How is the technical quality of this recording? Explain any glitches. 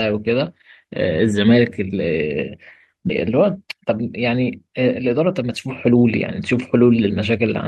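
The recording has three glitches in this speech: one jump forward and two stretches of sped-up playback.

At 3.09 to 3.11 s there is a skip ahead. About a second of audio was dropped while later audio was already queued. Playback leaps forward with no gap filled. The two sides join almost directly, so the speech lurches abruptly.

Jitter buffer speed-up follows from 3.29 to 6.05 s at 114% speed, then from 6.53 to 7.48 s at 107%. Too much audio had built up, likely after delayed packets arrived together. The receiver trimmed tiny pitch-period slices repeatedly, removing roughly 400 ms, then a little more. The speech sounds hurried but keeps its pitch.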